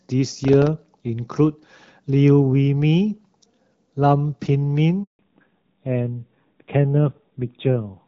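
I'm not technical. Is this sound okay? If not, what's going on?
No. At 5.03 s the phone passed the call from one network to another, and during that switch nothing got through. This handover gap leaves the speech cut off and silent for about 160 ms, until 5.19 s, and whatever was said then is lost.

Right after the switch, at 5.19 s, the call dropped from the clearer HD Voice setting to an older, more basic phone codec. With this fallback to narrowband, everything above 4 kHz is gone until the end, so the voice sounds duller, muffled and rougher.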